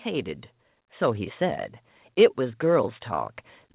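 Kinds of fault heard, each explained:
Automatic gain rising: the gain control judged the incoming level too low and began turning it up, so from about 2.36 s to the end of the clip at roughly 3.74 s the speech and the background noise floor swell together rather than the talker getting louder alone. The climb is gradual, not a step. The narrowband sound, with nothing above 4 kHz, points to a telephone-grade codec such as G.711 on the call path.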